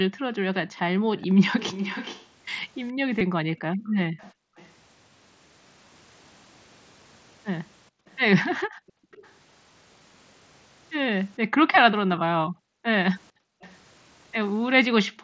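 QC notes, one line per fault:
0.12–0.2 s, 2.93–4.56 s, 7.9–9.11 s, 12.47 s to the end: background gated by the echo canceller. Room tone ducks by about 40 dB in brief dips, up to about a second each, while the far end plays.
1.18–2.27 s, 4.18–4.71 s, 8.06–9.32 s, 13.61–13.77 s: echo leak. A delayed copy trails by 421 ms at first, then 454 ms, about 10 dB down initially and about 25–30 dB down later. This is likely leftover loudspeaker pickup the far-end canceller missed.
3.19 s: concealed Bluetooth headset packet loss. A 15 ms hole is filled by repeating the preceding waveform, which fits a couple of lost frames.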